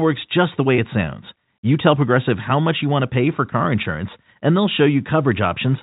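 A speech recording carried over G.711 mu-law telephone coding has one brief dropout from 0.76 to 0.78 s, between "just the" and "it sounds". This is packet loss with pitch repetition. About 20 ms of audio went missing, which fits a single lost packet, and the receiver filled the gap by repeating the last pitch period. Because the gap is so short, it comes across as a slightly held, buzzy moment rather than a silence. The G.711 path passes nothing above 4 kHz, and its quantisation noise is faint.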